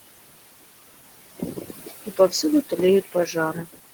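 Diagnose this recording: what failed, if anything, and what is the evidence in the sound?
The background noise between phrases falls away by about 19 dB and swells back up under the talker. These are noise suppressor artifacts from the call-processing stage. The suppressor estimates the steady room noise, which sits about 14 dB below the speech, and turns down every band it classes as noise frame by frame. That gating produces the pumping.

Parts of the speech itself go faint or sound swallowed at 1.39 to 1.9 s, 2.06 to 2.44 s, 3.05 to 3.36 s and 3.54 to 3.8 s. Each dip is about 16 to 19 dB deep and lasts a fraction of a second. This is speech cut by the noise suppressor, also at the call-processing stage. Quieter low-level speech energy looked like noise to the estimator, so those bands were attenuated along with the background.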